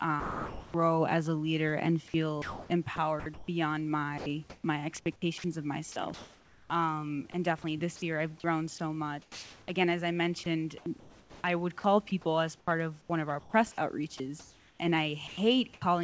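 From 0.20 to 0.74 s, just before "as a leader and", speech gives way to steady comfort noise, most likely sound dropped by the voice detector: one clean gap rather than repeated cuts.

From 2.08 to 15.82 s, after "as a leader and", the speech is likely chopped by the voice detector, with about 3.6 s swapped for comfort noise.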